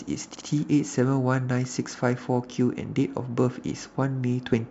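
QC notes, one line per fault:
0.34 to 0.46 s, repeated frames: one 60 ms stretch of speech plays three times in a row, adding 120 ms, because a run of compressed frames was sent again. Unlike an echo, each repeat is an identical copy at full level.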